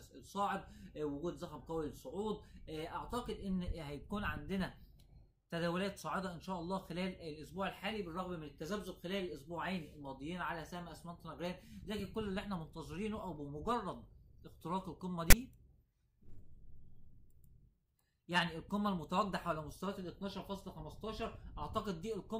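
At 15.30 s a short burst of static cuts in and stops at 15.33 s. This is file tags played as audio. A block of metadata, here text tags followed by zero padding, was decoded as if it were sound samples. The text bytes come out as a loud, harsh rasp pushed off-centre to one side. The padding that follows reads as pure silence. Both edges are abrupt, so the burst clicks in and out.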